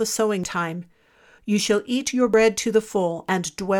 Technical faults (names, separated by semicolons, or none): audio missing between chunks